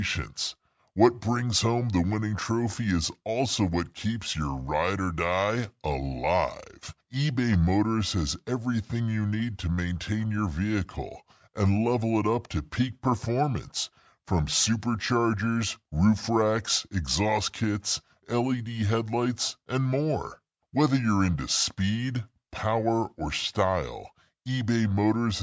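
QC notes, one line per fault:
Throughout: wrong sample rate. Speech runs at about 0.73× speed and 5.6 semitones low, which fits 22 kHz material played back at 16 kHz without conversion.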